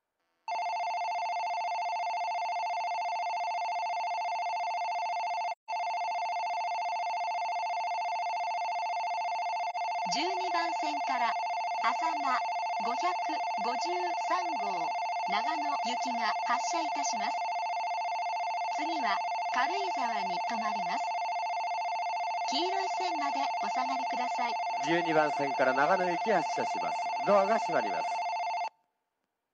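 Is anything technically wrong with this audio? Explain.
Yes. There is AAC frame loss with muting at 5.51 to 5.70 s, a gap of about 171 ms that fits four lost frames, and at 9.69 to 9.76 s, about 43 ms, fitting one frame. The decoder zeroed the missing spectrum, and the overlapping transform windows taper the sound down and back up across the loss, so the longer gap is a soft-edged hole and the single lost frame is a brief dip.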